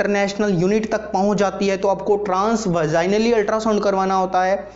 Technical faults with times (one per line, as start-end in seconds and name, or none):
none